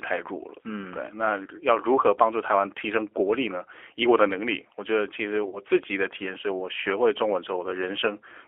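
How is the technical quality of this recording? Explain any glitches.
The quality is that of a narrowband phone call, with one brief dropout.

Throughout, the speech sounds thin and boxed-in, with a slightly rough, synthetic edge. The band runs only from about 300 Hz to 3.4 kHz. This is G.729 codec damage, and the 8 kbit/s rate fits that codec. The speech is rebuilt from a vocal tract filter, a pitch predictor and a few pulses per frame rather than the actual waveform, which explains the grainy, artificial texture.

From 5.49 to 5.59 s, the speech turns briefly buzzy or noisy and smeared, then weakens before recovering. This is VoIP packet loss concealed by the speech codec. About 40 ms of audio went missing, which fits two lost packets. The decoder filled the gap by repeating its last pitch and filter settings at falling gain. Because each frame depends on the one before, the distortion lingers slightly past the gap itself.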